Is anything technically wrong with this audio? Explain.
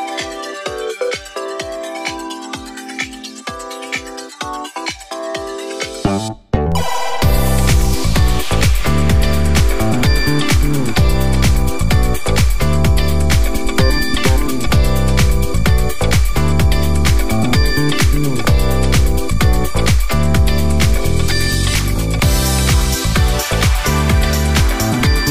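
Yes. There is a DC step. At 6.72 s the waveform's zero line jumps by about -17 dBFS, and the offset lasts until 21.46 s. Each jump gives a low thump or click. The sound itself carries on unchanged.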